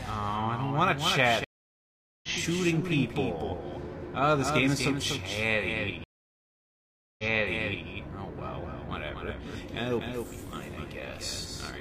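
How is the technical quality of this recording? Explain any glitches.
The technical quality is poor. A delayed duplicate of the audio runs through the whole clip, and playback drops out twice with a jump in position when it returns.

Doubled audio track, throughout: a second full-band copy of the same sound trails the original by about 300 ms, roughly 5 dB quieter. It carries no decay or room colouring, so it reads as a hard slapback rather than reverb. The likely cause is the signal being picked up twice, once through a slower path, or an edit leaving two copies out of alignment.

Stream reconnect, 1.44 to 2.29 s: the connection dropped, the player fell silent for about 0.79 s, then re-established the link and started a new decoder mid-stream. Because it was a live feed, playback resumed about 0.7 s further along than where it stopped, so a stretch of material is simply missing across the gap.

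Stream reconnect, 6.04 to 7.88 s: the same failure, with a longer silence of about 1.15 s. This time the server resent a burst of buffered data, so playback picked up 0.70 s earlier than the break point. A short section is heard twice on either side of the silence.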